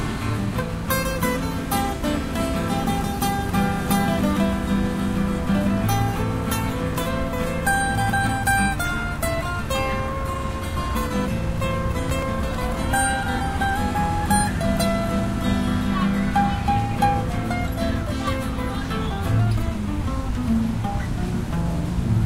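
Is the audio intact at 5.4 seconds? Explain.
Yes, the audio is intact at 5.4 seconds, with no fault audible at that moment.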